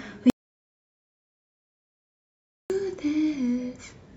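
From 0.30 to 2.70 s, an audio dropout to silence cuts 2.4 s of speech, likely lost input. Unlike a pause, no room tone remains.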